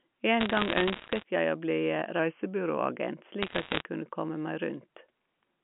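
From 0.40 to 1.23 s, and again from 3.43 to 3.82 s, bit errors on a digital phone line crackle over the speech. Flipped bits corrupt single G.711 samples, making sharp ticks. Roughly one percent of bits fail, a little more in the second burst.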